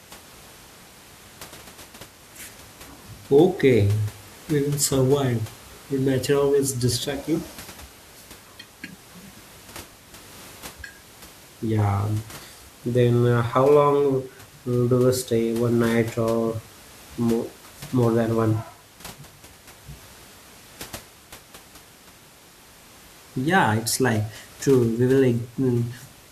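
I hear no technical faults anywhere in this recording.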